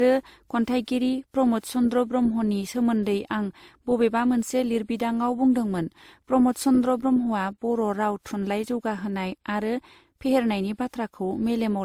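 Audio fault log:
Throughout: transcoding between lossy codecs. Two different artefact textures stack rather than one, with nothing above 20.2 kHz, likely WMA near 96 kbit/s re-encoded as Opus near 32 kbit/s.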